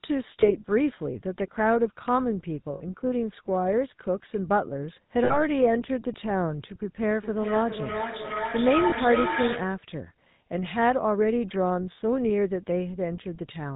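GSM full-rate codec damage runs through the whole speech clip, with a sound that fits the 13 kbps full-rate coder. It rebuilds the vocal tract from sparse, regularly spaced excitation pulses and cuts everything above 4 kHz, which leaves a plainly audible buzzy, gravelly roughness and a dull top end.

Lost GSM frames appear at 0.41 to 0.52 s, 2.74 to 2.83 s, 5.24 to 5.42 s and 8.90 to 8.94 s. The decoder fills each gap by repeating the last good frame's settings. The effect is a rough, metallic ring that is short at 0.41 s and 8.90 s, which fits a single 20 ms frame, and longer at 2.74 s and 5.24 s, which fits about 60 ms of lost frames.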